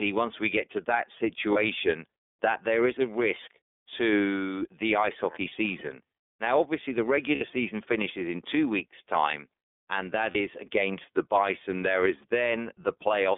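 The whole recording has passed through the iLBC codec, a narrowband VoIP coder that encodes each frame's excitation independently. The passband runs only from about 250 Hz to 3.6 kHz, and the coarse block-by-block coding, which fits iLBC's 13.33 kbps mode with 30 ms frames, leaves the speech plainly rough and slightly synthetic, with a thin, boxy tone and no air above the cut-off.

There are lost iLBC frames at 1.52, 5.48, 7.35 and 10.32 s. At each one the decoder had no data and covered the hole by repeating the last pitch cycle mixed with noise. The gaps at 1.52, 5.48 and 10.32 s last about 30 ms, and the one at 7.35 s runs about 60 ms. Each sounds like a brief held, buzzy vowel, and because every frame stands alone, the speech snaps back clean right after.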